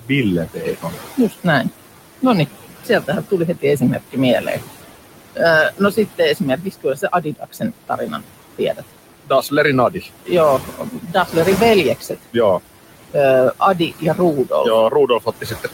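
Noise suppressor artifacts run through the whole clip. The suppressor pulls the room noise, which sits about 12 dB below the speech, down by about 17 dB in each frequency band it judges steady. The background sinks in the pauses, swells back under each phrase, and leaves a residue. Because the noise level pumps with the speech, this is not a fixed filter or a gate; a gate would switch the noise in and out rather than reshaping it band by band.

Speech cut by the noise suppressor occurs in four spans: 0.01 to 1.65 s, 2.84 to 4.59 s, 5.35 to 11.36 s, and 12.0 s to the end. Here the suppressor mistakes parts of the speech for noise and turns them down with the background. The deepest drops are about 16 to 19 dB. Roughly half a second is affected in the first span, under half a second in the second, and around two seconds in the long third span. Soft consonants and word endings sound swallowed or faint. 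Those quieter fragments are turned down along with the background, which is what separates this from a whole-signal level drop or a dropout.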